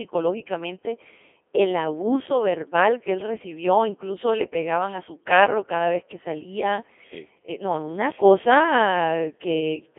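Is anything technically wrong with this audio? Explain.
Yes. Throughout the speech, Codec 2 vocoder processing is clearly audible. The decoder rebuilds the speech from sine waves driven by pitch, voicing and envelope data, which fits a 2.4 kbit/s mode. The result is a heavy robotic, buzzy sound confined to roughly 300 Hz to 3.4 kHz, with nothing above 3.6 kHz. Plain telephone band-limiting would keep the natural texture, but here the waveform itself is synthetic.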